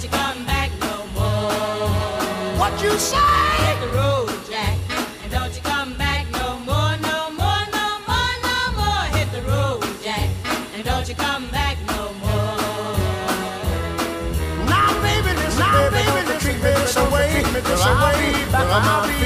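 From 14.83 s to the end, every sound is followed by an identical full-band repeat about one second later, roughly as loud as the original, with no fading tail or room colour, and it cuts in abruptly. This is a doubled audio track: the same material is mixed in twice, out of step. The likely cause is a second capture through a slower path, or an edit leaving two offset copies in place.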